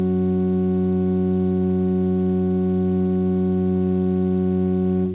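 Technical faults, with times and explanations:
5.14 s, sound dropped by the voice detector: the sender likely took the music for background and stopped sending, so its last 10 ms become comfort noise.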